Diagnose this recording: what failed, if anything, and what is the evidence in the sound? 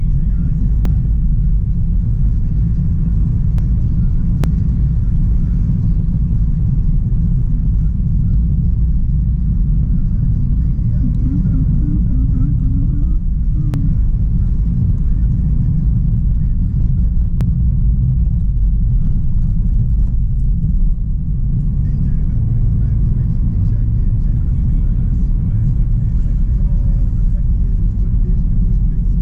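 Dropped buffer (overrun) at 0.85, 3.58, 4.44, 13.74 and 17.41 s: each point has an abrupt jump forward in the sound and no gap of silence. Roughly a tenth to a third of a second goes missing each time, longest near 4.44 s. The likely cause is at the driver or buffer stage: the capture software fell behind, the hardware overwrote unread samples, and the audio on either side was spliced directly together.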